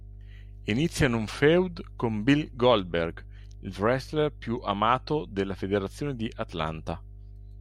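A ground loop or nearby transformer leaks the 50 Hz power line into the signal, leaving steady mains hum under the speech throughout, roughly 20 dB below it.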